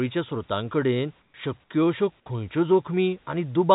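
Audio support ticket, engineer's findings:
Comfort noise in place of the background, 1.22–1.34 s, just before "शक्य अशो खंयच्यो". Room noise, about 42 dB under speech, swapped for 120 ms of smoother noise about 5 dB quieter. Likely cause: discontinuous transmission, receiver synthesising noise during the gap.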